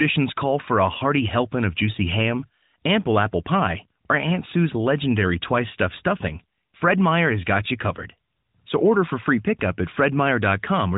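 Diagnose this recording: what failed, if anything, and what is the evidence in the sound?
Nothing has failed anywhere in this speech recording.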